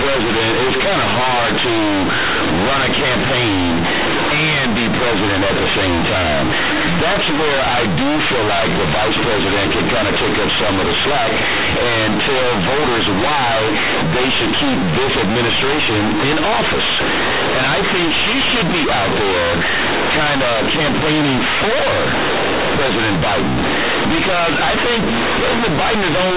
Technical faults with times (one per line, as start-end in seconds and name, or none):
0.00-26.37 companded audio read as linear